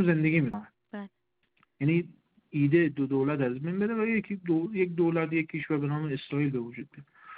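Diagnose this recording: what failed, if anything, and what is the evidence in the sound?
The codec stage failed: compressed frames were skipped near 0.44 to 0.54 s, where the sound jumps forward by roughly a tenth of a second.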